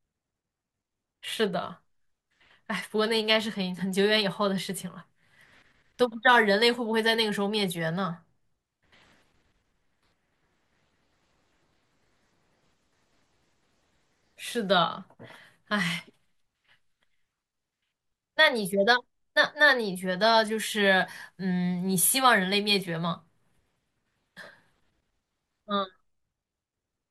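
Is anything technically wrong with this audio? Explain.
No, no technical faults here.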